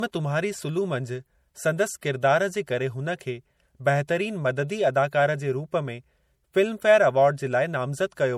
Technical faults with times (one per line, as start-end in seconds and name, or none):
0.00-8.37 low-bitrate audio saved at a high bitrate